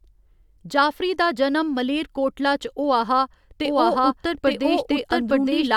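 Speech, with a doubled audio track from 3.65 s to the end. A second full-band copy, at about the same level, enters abruptly about a second behind and runs unchanged with no decay. That likely comes from a second, slower capture path. On a spectrogram the patterns repeat, shifted right by one second. The waveform shows overlapping, denser energy.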